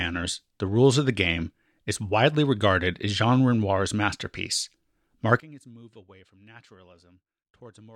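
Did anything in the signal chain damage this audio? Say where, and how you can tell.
Yes. From 5.40 s to the end, the speech drops by about 26 dB to a faint copy. It never cuts to silence, and what remains is the difference material between channels. The likely cause is one channel inverted, probably from a swapped conductor in analogue wiring or a polarity flip before a mono sum, so the centred voice cancels against itself. A dropout or mute would leave nothing, and a gain fault would keep the tone full.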